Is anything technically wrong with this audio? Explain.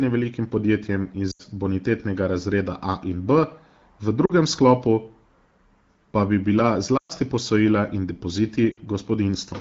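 Yes, there are four short dropouts in this speech, and they're lost AMR speech frames. They hit at 1.31–1.42 s, 4.25–4.32 s, 6.97–7.13 s and 8.71–8.80 s. Radio errors corrupted those frames, so the wideband decoder padded the gaps by repeating the last good pitch and vocal tract settings at falling gain. The gaps run roughly 40 to 120 ms, which fits two to six 20 ms frames. You hear each one as the voice dropping to near silence within two frames. The 6.97 s one is longest, and the voice comes back a bit rough.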